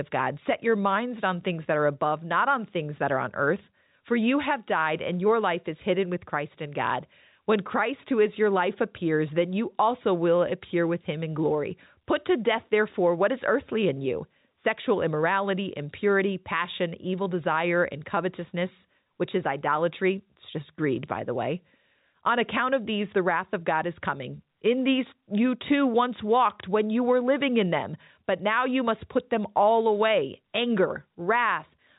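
No faults in this speech recording; the band tops out at 3.8 kHz, as expected from G.711 A-law telephone coding doing its job.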